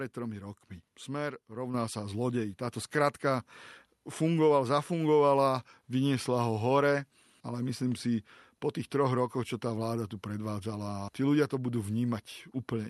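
At 1.74 s the microphone volume is stepped up: the call software judged the input too quiet and raised it about 6 dB at once, so voice and background jump louder together.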